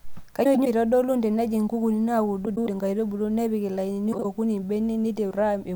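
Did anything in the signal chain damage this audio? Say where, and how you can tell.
Yes. Three short stretches of the speech flutter and garble, at 0.44–0.67 s just before "eitodolu tenejing' nkukuni", at 2.45–2.68 s just after those same words, and at 4.12–4.25 s. This is frames out of order, a network-stage fault. Two adjacent blocks arrived swapped and were decoded in that order, so each stretch plays its halves reversed with no time lost. The block lengths of about 104 ms and 52 ms point to runs of four and two frames.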